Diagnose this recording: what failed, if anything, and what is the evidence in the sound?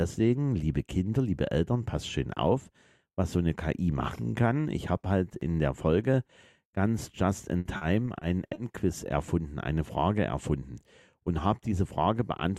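Repeated packet loss on the network path from 7.59 to 8.57 s: six gaps up to 60 ms, each patched by extending earlier sound, leave choppy, robotic audio.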